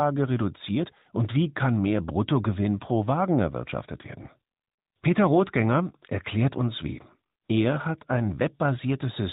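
From start to finish the speech has passed through the AMR narrowband mobile codec. Nothing above 4 kHz survives, so the sound is muffled and telephone-like, and the pulse-driven vocal-tract model leaves a plainly audible buzzy, synthetic edge, consistent with a higher-rate mode around 10 kbps.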